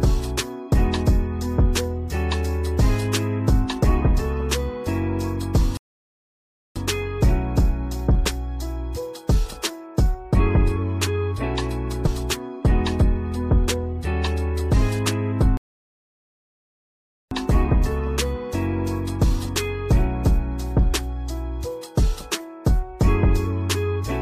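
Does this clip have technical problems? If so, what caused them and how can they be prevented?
Yes. The sound cuts to silence from 5.77 to 6.76 s, close to a second, and again from 15.57 to 17.31 s, about 1.74 s, each time stopping mid-flow and then carrying on. This is a playback stall, likely the player running out of buffered data or its thread being blocked until it recovered. It differs from a brief dropout in its length and in the clean, total silence. Larger playback buffers and giving the audio thread priority prevent it.

Between 12.05 and 12.07 s there is a short fault. This is damaged data in a compressed stream: corrupted bytes made the decoder misread frames, lose sync and skip ahead to the next valid frame header. A plain click would leave the sound continuous. Checksummed transfer and verified storage of the stream prevent it.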